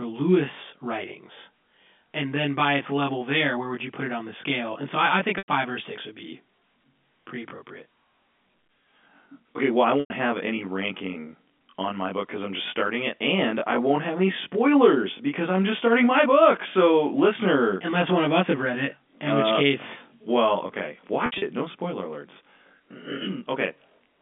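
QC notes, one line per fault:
Throughout, channel delay (comb filtering): The speech sounds rough and slightly doubled. One channel runs roughly 20 ms behind the other, and when the two are summed to mono the shared content cancels at closely spaced frequencies, with the first notch down around 20 Hz. The result is a fixed comb of dips across the band, heard through the narrow telephone band of the G.711 A-law line.
5.38–5.48 s, 10.00–10.10 s, 21.26–21.42 s, packet loss with pitch repetition: Each gap sounds like a brief buzzy hold on the last voiced sound, which then fades toward silence. The first two each drop about 100 ms, after "so I I think" (resuming at "or a six would") and after "well I". These are too long to bridge, so the repeated pitch cycle dies away before speech cross-fades back in. After "which case well okay", about 120 ms is lost in pieces over 160 ms, with runs up to 60 ms, giving a held buzz.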